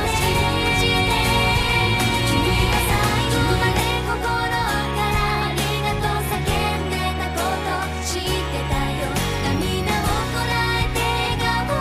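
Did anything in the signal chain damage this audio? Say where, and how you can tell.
Yes. From the very start until 3.8 s there is a doubled audio track: every sound comes back a second time, roughly a second later, at about the same level as the original, full-band, with no decay or room colouring, and the copy cuts off abruptly at 3.8 s. That clean, fixed-offset repeat is not an acoustic echo. The cause is likely a second capture path in the driver or buffer stage, or an edit that left two out-of-step copies overlapping.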